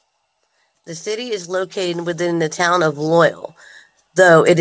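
Speech heard over a call, with nothing above 8 kHz, which fits a wideband codec such as G.722. The fault is automatic gain rising. From 0.85 s to 3.39 s the level climbs steadily, by about 13 dB in total. The voice and the background noise swell together. That shared rise is the sign of gain control. The system judged the input too quiet. It then raised its gain slowly, over about two and a half seconds.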